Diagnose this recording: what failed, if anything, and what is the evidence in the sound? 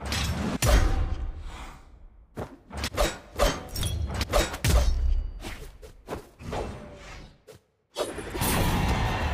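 Nothing in this recording points to a failure at any stage, so there's no fault to diagnose here.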